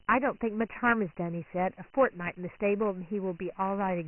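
The speech sounds boxed-in and gritty, with a granular hiss riding on every syllable and nothing above 3 kHz for the whole clip. That points to Dialogic VOX ADPCM at about 24 kbps, whose 4-bit steps, fitting a 6,000-sample rate, leave heavy quantisation noise.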